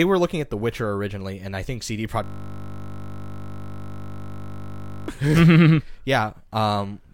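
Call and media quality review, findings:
System hang loop, 2.24 to 5.08 s: speech freezes into a steady 50 Hz buzz. The same 20 ms slice keeps replaying, which fits a stalled driver or host while the audio hardware keeps cycling one small ring buffer. It recovers at 5.08.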